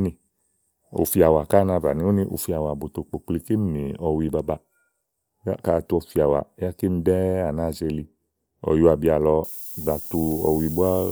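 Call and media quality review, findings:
Low bit depth with noise shaping, 9.44 s to end. Thin steady hiss, climbing sharply toward the top of the band, about 15 dB under the speech. Fits 7-bit requantisation with rounding error pushed upward. Probable component: output quantiser stage.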